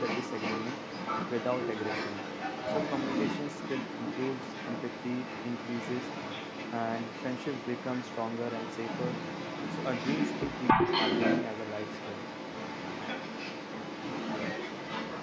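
Echo leak runs from the start to the end of the speech: the speech is followed about 275 ms later by a second copy at roughly the same loudness as the original, so the talker seems to overlap with a slightly late version of themselves. This likely comes from a far end playing the call on a loudspeaker, with an echo canceller that failed to subtract what its microphone picked up and sent it back. The call's microphone path, with nothing above 8 kHz, carries both copies.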